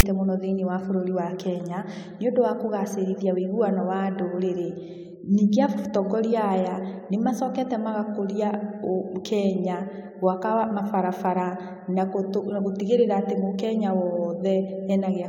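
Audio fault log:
0.00 to 0.03 s, file tags played as audio. A brief harsh rasp opens the speech clip, then drops to silence. A block of text tags is read as samples. The text bytes sit off-centre, giving a lopsided buzz. Zero padding gives the silent gap.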